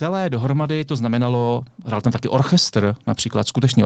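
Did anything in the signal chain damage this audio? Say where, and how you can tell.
Yes. In the call processing, the automatic gain control judged the input too quiet and kept raising its gain from 0.05 s to 3.85 s. The speech and background noise swell together steadily, a rise in level that the speech itself doesn't account for.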